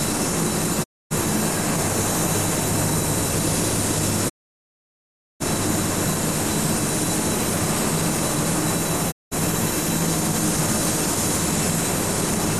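Digital broadcast dropouts at 0.82 to 1.13 s, 4.28 to 5.42 s and 9.10 to 9.33 s: the receiver stopped getting decodable frames and muted, fading out over about 20 ms, so 0.26 s, 1.1 s and 0.19 s of the everyday sound vanish before resuming further on.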